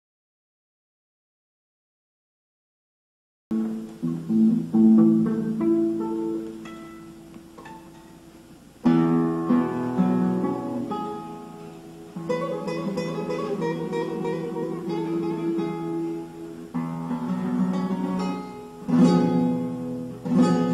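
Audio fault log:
0.00–3.51 s, audio dropout to silence: the clip opens already inside a dead gap that lasts 3.51 s before the sound comes back mid-flow. The gap holds no room tone or noise floor at all, which separates it from a quiet passage or a noise gate closing. It was likely caused by the input being lost through a disconnected device, a failed link or a stray mute while recording carried on writing silence, so whatever sounded then is gone.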